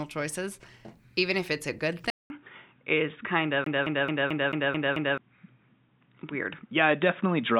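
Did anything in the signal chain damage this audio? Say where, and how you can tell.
Yes. At 2.10 s, right after "if it's a good", the audio drops out for about 200 ms and returns duller and boxier, with nothing above 3.8 kHz through to the end. This points to the capture stage: the input was likely switched to a poorer device, such as another microphone or a headset's call profile. The level stays much the same, but a faint new noise floor appears, far below the speech. On a spectrogram, the upper band is sharply cut off after a short blank gap.

A second fault sits in playback from storage. It sounds like a CD stuck on one turn. From 3.64 s to 5.18 s, the same 0.22 s fragment plays seven times in a rapid, evenly spaced stutter, with a brief mute at each jump back. A scratch keeps throwing the laser back one track at the same point. The waveform shows identical 219 ms blocks repeated side by side, each separated by a tiny flat gap, and the spectrogram shows matching vertical slices at a regular spacing.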